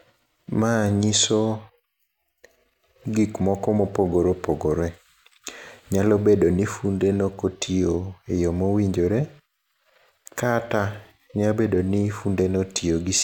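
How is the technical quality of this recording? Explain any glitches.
No glitches can be heard anywhere in the recording; the speech signal stays continuous and intact throughout, with no technical faults to explain.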